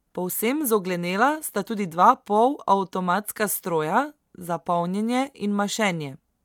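Nothing stood out on listening to this speech recording.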